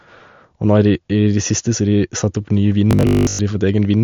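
Throughout the speech, a starved encoder likely applied MP3 compression at a low bitrate, around 50 kbps judging by the damage. Weak frequency lines flicker between frames, leaving a plainly audible watery swirl and smeared attacks.

From 2.91 to 3.39 s, new audio likely arrived too seldom, so the software kept replaying its last short buffer, for most of that stretch, while fresh audio was skipped. This robotic sound from repeated short buffers imposes a rigid 50 Hz buzz, which fits a 20 ms buffer.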